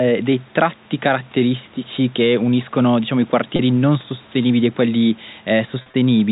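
At 3.56 to 3.59 s, about 30 ms of speech drops out and is bridged by packet loss with pitch repetition: the receiver loops the last pitch period, so the gap sounds like a brief held, slightly buzzy tone. From 5.82 to 5.94 s, about 90 ms is lost in scattered gaps over 120 ms, the longest run 40 ms, which fits 10 ms packets. The repeated cycles fade, giving short held, buzzy stretches.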